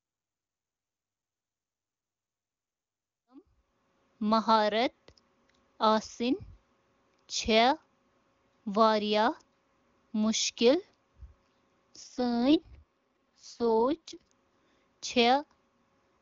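At 12.03 s the speech suddenly goes rougher and more synthetic, a classic AMR rate drop. Nothing drops out and the bandwidth doesn't narrow. The codec just gets told to run much leaner, with fewer bits for the voice and more for error protection. Going from full HD Voice quality down to that raspy texture fits a step from 23.85 to 6.6 kbit/s AMR-WB. It recovers at 14.32 s. The earlier fade-in, finishing at 4.12 s, is clean.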